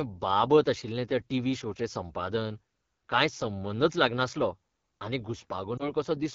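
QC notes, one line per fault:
Throughout: AMR wideband (HD Voice) codec, speech rough and raspy, consistent with the low 8.85 kbit/s mode, where the pulse-driven vocal tract model runs short of bits.
3.85 to 6.34 s: channel delay (comb filtering), starting after "टीव्ही शोचें संपादन कांय", a lag of roughly one sample, summed to mono, cancelling shared content with a first notch near the top of hearing, dulling the highs.
5.77 to 5.92 s: lost AMR speech frames, a brief dip or warble, consistent with one lost 20 ms frame concealed by repeating the last good settings at falling gain before recovery.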